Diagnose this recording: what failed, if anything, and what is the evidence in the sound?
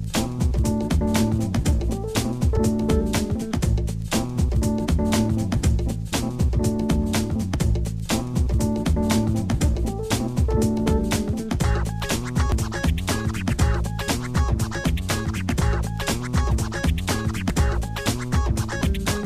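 Short skips at 2.57, 7.54, 12.52 and 17.50 s, every 5 s, each losing about 20 ms. This is likely audio missing between chunks at the buffer stage.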